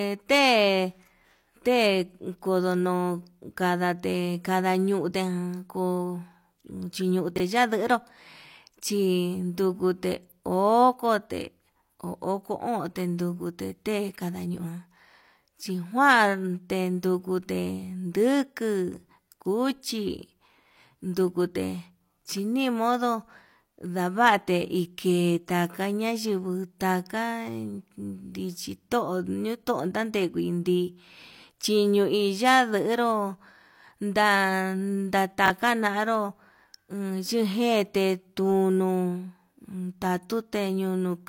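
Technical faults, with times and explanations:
7.36 to 7.40 s and 35.46 to 35.50 s, chunks out of order: each spot is a brief jumbled stutter, as if a sliver of the speech were shuffled. Two 20 ms pieces swapped places, with one arriving a single chunk late and playing after the piece that should follow it. Nothing goes missing, but the wrong sequence creates three abrupt joins where the waveform jumps.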